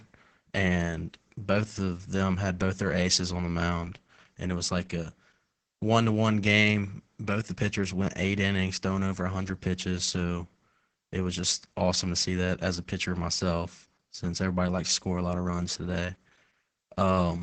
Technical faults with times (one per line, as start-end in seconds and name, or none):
0.00-17.43 Opus voice compression